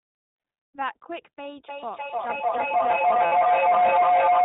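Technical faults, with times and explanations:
Throughout, iLBC codec. The speech is band-limited, with nothing above 4 kHz, and sounds plainly rough and synthetic. Each 20 ms frame is coded on its own, at a rate that fits about 15 kbps. The coarse excitation coding gives the buzzy, artificial edge.
1.67 s to the end, feedback howl. A tone near 700 Hz builds up and holds to the end, peaking about 14 dB above the speech. It pulses roughly every third of a second. Two devices share a room and call, and the loop keeps adding gain.
3.26 to 3.34 s, lost iLBC frames. For 60 ms the speech turns into a held, slightly buzzy vowel. This fits about three lost frames, with the decoder repeating the last pitch cycle mixed with noise. Because frames stand alone, the sound recovers almost at once.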